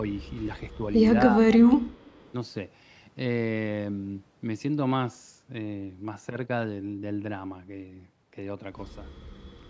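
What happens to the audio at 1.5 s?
The speech sinks by roughly 25 dB from 1.29 to 1.86 s, likely speech suppressed in double talk: the echo canceller ducks the talker during overlapping talk.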